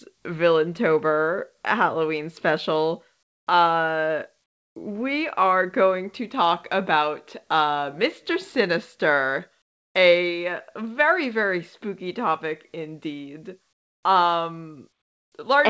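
In this speech clip, the sender likely stopped transmitting during pauses, leaving comfort noise in place of the background at 3.23–3.47 s, 4.46–4.76 s (after "special uh"), 9.62–9.95 s (before "a very very spooky") and 13.73–14.03 s (after "very spooky topic indeed"). Each gap becomes flat, featureless hiss about 20 dB quieter than the real background, over a call codec that carries nothing above 8 kHz.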